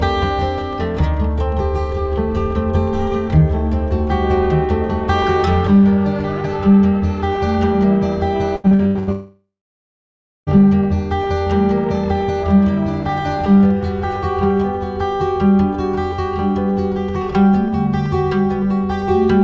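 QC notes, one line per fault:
8.56–9.11 s, repeated packet loss (robotic sound): five short holes in quick succession, the longest about 88 ms, together taking out roughly 0.32 s of the half-second span. Each hole is bridged by stretching the preceding audio, so about 58% of the stretch is synthesised. Because these patches come back to back, the result is choppy, with pieces missing. This is on top of the 8 kHz band limit that is normal for the G.722 call path.
9.12–10.50 s, long network dropout: about 1.4 s of audio is lost outright. The opening few tenths of a second carry a smeared continuation of the last sound that decays away, followed by roughly 0.95 s of silence before the signal resumes with the gap simply skipped. This pattern, fading concealment followed by dead air, is the likely signature of the stream stalling entirely rather than dropping isolated packets.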